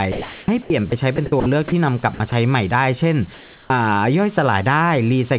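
From 0.12 to 1.72 s the speech is chopped by the voice detector, which likely switched transmission on and off several times. About 580 ms in total is replaced by synthetic fill, so syllable edges vanish. On a spectrogram, speech harmonics break off into patches of flat, even noise. In the waveform, the speech envelope is interrupted by short blocks of uniform low-level hash.

At 2.14 to 2.20 s, 60 ms of speech is dropped by the voice detector. The sender likely mistook a quiet stretch for background, and comfort noise was played in its place. The sound briefly gives way to steady noise. A spectrogram shows a narrow gap where the speech energy is replaced by smooth, structureless noise.

From 3.34 to 3.70 s the real background is replaced by comfort noise. The background normally sits about 26 dB below the loudest speech, and for this 360 ms it becomes a featureless hiss about 8 dB quieter, likely generated at the receiver during a pause in transmission. 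On a spectrogram the textured background turns into a uniform, lighter band. In the waveform the noise floor drops to a lower, even level.

At 3.65 s the following onset is clipped by the voice detector. Roughly 50 ms of the start is missing, likely because detection was late, so the speech begins abruptly without its soft rise. The waveform jumps straight from the comfort noise into the speech, and the spectrogram shows a hard vertical edge where the onset should build gradually.

Throughout, the call path leaves nothing above 4 kHz, which fits G.711 A-law. On a spectrogram this appears as a sharp ceiling at 4 kHz.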